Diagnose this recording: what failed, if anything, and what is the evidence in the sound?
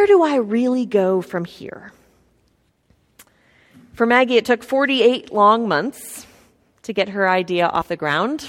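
The failure is at the codec stage: compressed frames skipped. At 7.80 to 7.82 s, right after "months to get her", the speech lurches forward, losing roughly 50 ms of material in a couple of whole frames. Those frames were either missing from the stream or rejected by the decoder as corrupt, so playback resumed at the next good frame.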